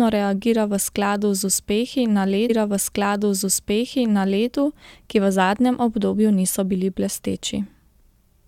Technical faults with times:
2.49-4.48 stream segment repeated

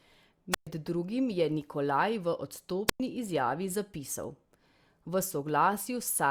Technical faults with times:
0.51-0.67 wireless microphone squelch dropout
2.87-3.00 wireless microphone squelch dropout

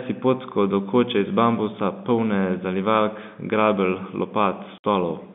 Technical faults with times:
4.78-4.84 packet loss filled with silence

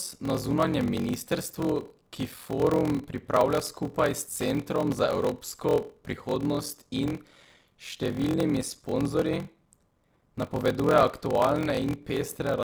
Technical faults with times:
0.00-12.63 block size mismatch (padded)

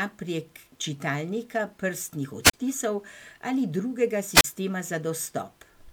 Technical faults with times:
2.43-2.54 wireless microphone squelch dropout
4.35-4.44 wireless microphone squelch dropout

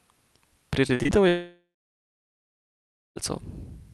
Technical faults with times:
0.87-1.10 repeated packet loss (robotic sound)
1.28-3.18 long network dropout

